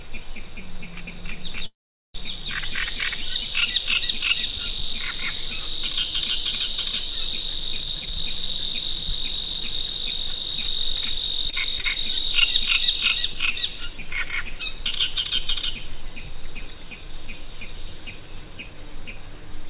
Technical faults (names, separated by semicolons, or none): call audio freeze; jitter buffer speed-up; repeated packet loss (robotic sound); short stall from a late packet